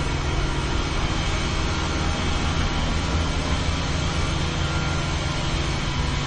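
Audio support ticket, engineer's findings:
Transcoding between lossy codecs, throughout: nothing above 9.6 kHz, with the artefacts of different codecs heard together. Likely an MP3 encode at around 38 kbit/s re-encoded to Opus at around 32 kbit/s, each stage adding its own damage.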